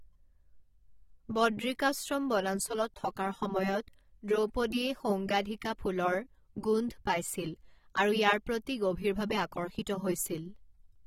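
From start to finish the speech carries plainly audible AAC compression artefacts, likely from AAC-LC coding. Nothing is present above about 16.6 kHz, and within that band the sound is dulled and smeared, with a watery, fizzy texture on sibilants and held vowels. The encoder has quantised each frame's spectrum too coarsely, leaving gaps that shift from frame to frame. The depth of the damage fits a low rate of around 32 kbps.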